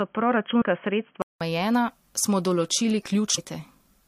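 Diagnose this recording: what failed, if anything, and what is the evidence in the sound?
The failure sits at the input-device stage. For the first 1.41 s the speech is band-limited, with nothing above 3.3 kHz, so it sounds boxy and telephone-like. At 1.41 s there's a gap of about 0.19 s, and then full bandwidth returns. Loudness barely shifts across the change, and the early stretch carries its own faint background noise well under the speech. That pattern points to an input switched to a poorer device, likely a headset's narrowband call profile, before the system moved back to the proper mic.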